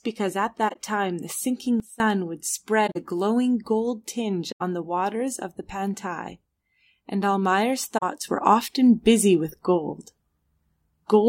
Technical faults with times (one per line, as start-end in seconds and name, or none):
0.68-0.76 corrupt frame concealed
1.80-2.00 sudden gain jump
2.86-2.97 corrupt frame concealed
4.51-4.61 corrupt frame concealed
7.97-8.03 corrupt frame concealed
8.24-11.29 sudden gain jump